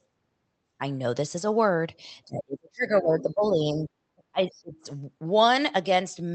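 From 2.27 to 3.89 s, speech is suppressed in double talk, likely because the echo canceller could not tell the local talker from loudspeaker echo and turned both down; the speech dips by up to about 35 dB across roughly a second and a half. Between 2.96 and 3.01 s, the other side's voice leaks through, likely residual loudspeaker echo the canceller missed, as a faint scrap about 30 dB below the speech. The same suppression returns from 4.15 to 4.88 s, dropping the speech by up to about 35 dB for around half a second, with another faint leak of the other side's voice at 4.54 to 4.60 s, again about 30 dB down. Throughout, the call path's band limit, which fits Opus coding with an 8 kHz bandwidth, can be heard.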